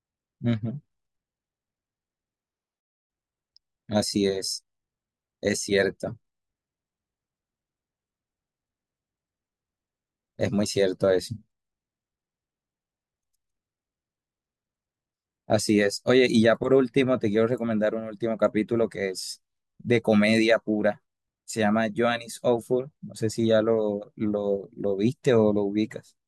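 Nothing in this bit of speech stands out as a technical fault, so there's nothing here to pick apart.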